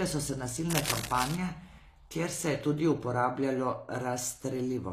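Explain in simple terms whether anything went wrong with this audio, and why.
The recording was likely squeezed through HE-AAC compression, which keeps only the lower part of the sound and fakes the treble by copying lower tones upward. Throughout, the speech's s sounds turn gritty and metallic, and nothing remains above about 14.9 kHz.

Just after "so se", from 0.70 to 1.37 s, a worn cable or connector was likely jostled, causing cable scratch noise. Its electrical contact flickered, adding a loud, uneven scratching rustle nearly as strong as the speech itself.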